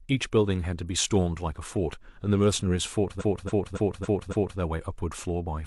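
From 3.16 to 4.55 s, repeated frames: a 279 ms run of compressed audio plays five more times, a stutter that lengthens the clip by 1.39 s.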